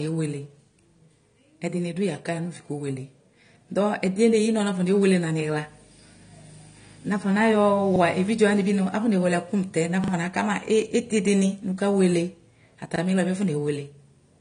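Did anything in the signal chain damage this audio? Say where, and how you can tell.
Yes. The codec stage is the likely cause of the first problem: AAC compression, of the AAC-LC kind, throughout the speech. Nothing is present above 9.7 kHz, so the top of the spectrum is simply cut away, and the remaining bands sound dull and smeared, with a fizzy, warbling edge on sibilants. The damage is plainly audible across all of it, which fits a low bitrate of around 32 kbps, where the encoder gives up the high band and coarsens what it keeps.

The second fault sits at the driver or buffer stage: a repeated buffer, heard three times. When fresh audio failed to arrive, the device replayed the last block, so a short slice sounds again with a hard join. At 7.96 s and 12.96 s it repeats once, giving a 40 ms stutter. At 10.04 s, just after "afɔnewele ɛkʋ mʋtɛ", it repeats twice, stretching to 80 ms. The repeat length fits a 40 ms buffer. 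Little or no audio was lost.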